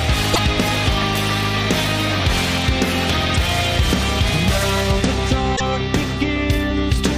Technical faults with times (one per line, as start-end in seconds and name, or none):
0.30-0.39 damaged data in a compressed stream
3.34-3.36 damaged data in a compressed stream
5.55-5.61 damaged data in a compressed stream